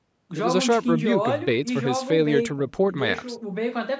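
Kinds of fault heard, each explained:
No faults can be heard in the recording. The speech has passed through call microphone processing, which leaves nothing above 8 kHz and trims away the lowest bass with its high-pass filter, as expected.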